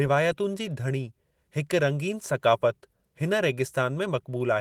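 No faults found; the speech carries the light coding texture and full bandwidth, up to about 20.4 kHz, that fit Opus in hybrid fullband mode at around 20 kbps.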